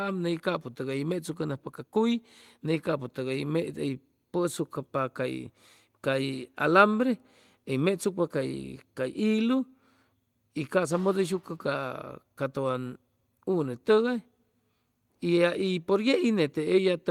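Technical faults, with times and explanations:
No technical faults can be heard in this speech recording.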